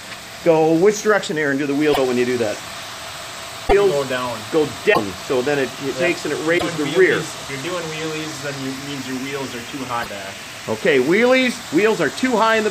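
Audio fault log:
1.92–1.98, 3.67–3.73, 4.93–4.98, 6.57–6.63 and 10.02–10.08 s: broken MP3 bit reservoir. Each event is a disturbance of about 60 ms after which the sound jumps ahead. The likely cause is missing frames: the next frame reaches back for borrowed data and decodes another frame's bytes. Unlike a simple dropout or click, the disturbance lasts about two 26.1 ms frames and the sound resumes further on rather than continuing from where it stopped.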